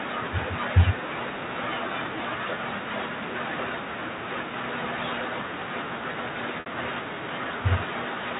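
At 6.60 to 6.66 s, packet loss with pitch repetition: the receiver repeated the last pitch period for 60 ms, briefly holding the speech as a buzzy tone.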